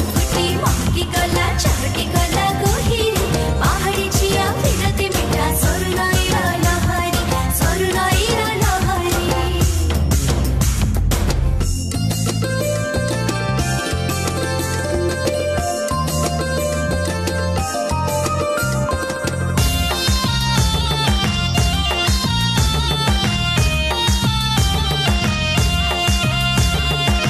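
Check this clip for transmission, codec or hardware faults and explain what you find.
Tiny skips fall at 1.33, 3.34, 5.32, 7.31, 9.29, 11.28, 13.27 and 15.25 s, roughly every 2 s. This is overlap between stream segments. At each 2 s segment join, overlapping time stamps make the player discard 6 to 19 ms of sound that was never duplicated, so the waveform jumps.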